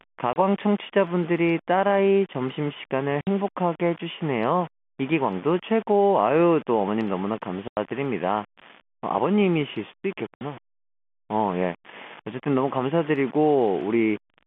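From start to finish the speech carries a grainy, level-following distortion, with the error sitting only about 20 dB below the signal. This is likely low bit depth without dither, rounded to around 5 bits. On a spectrogram it appears as broadband noise that rises and falls with the speech. On a waveform the quiet stretches look like coarse steps.

Packet loss filled with silence cuts four holes into the speech: 30 ms at 0.33 s, 60 ms at 3.21 s, 90 ms at 7.68 s and 60 ms at 10.37 s. All four lengths are multiples of 30 ms, which fits 30 ms packets. Each hole shows as a flat, empty gap with abrupt edges on the waveform and as a blank vertical stripe on the spectrogram. The telephone band, roughly 150 Hz to 3.5 kHz, stays visible around each gap.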